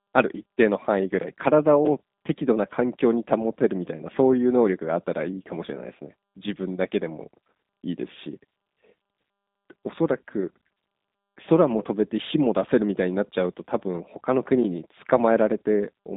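From start to finish, the speech has passed through a G.729 codec, the low-rate VoIP coder that does not send the waveform itself. It transmits a vocal tract filter, a pitch predictor and a few coded pulses per 10 ms frame, which fits an 8 kbit/s stream. The line is held to roughly 150 Hz to 3.7 kHz, with nothing above 3.8 kHz, so the speech sounds narrow and muffled, and the rebuilt excitation leaves a plainly audible rough, synthetic buzz.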